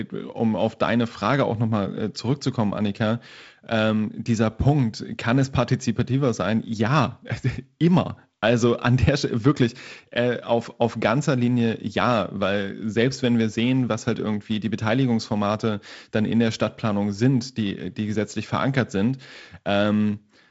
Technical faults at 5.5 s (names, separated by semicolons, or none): none